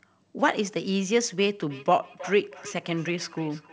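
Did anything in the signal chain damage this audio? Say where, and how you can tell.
Yes, there's a feedback echo between two devices from 1.66 s to the end. The sound comes back roughly every 300 ms, thinner and ringier, peaking about 18 dB under the speech. That's a call-processing loop: a second device's playback reaches a mic whose canceller can't subtract it.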